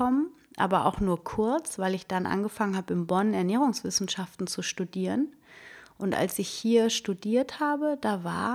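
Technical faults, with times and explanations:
No technical faults detected.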